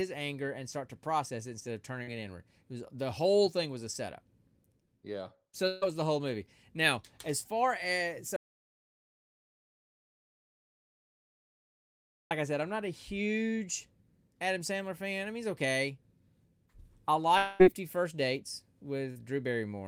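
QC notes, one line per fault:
2.03–2.09 s, after "process it instead of", and 19.12–19.17 s, short concealed packet loss: about 40 ms was lost and replaced by continuing the last sound, giving a brief smear rather than a gap.
5.67–5.84 s, before "was the whole movie", burst of packet loss: about 140 ms was lost and filled with the last sound fading as a buzz or hiss, longer than the smears above, with no silence.
8.36–12.31 s, between "as far as" and "I said I'm not", audio dropout to silence: about 3.9 s is gone and replaced by true silence with no room tone, unlike the concealed gaps. The input was likely lost.
17.38–17.62 s, long network dropout: about 220 ms never played and was filled with a fading continuation of the last sound, not silence. This was likely a longer stall in network delivery.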